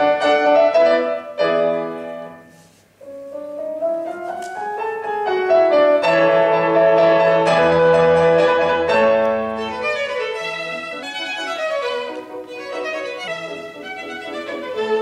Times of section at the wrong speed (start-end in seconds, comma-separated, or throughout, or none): 11.03-13.28